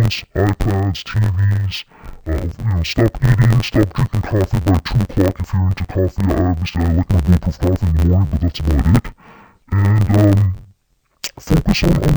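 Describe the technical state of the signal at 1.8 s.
At 1.8 s the speech sounds dull and robotic, with a steady buzz near 92 Hz and no clear drop in pitch. This is interleaved audio read as planar, present throughout the clip. Each 10.88 ms block of alternating left and right samples is split so its first half plays as left and its second half as right, at half speed. With blocks this short, the result is a rough 91.9 Hz chop rather than an octave-low doubling.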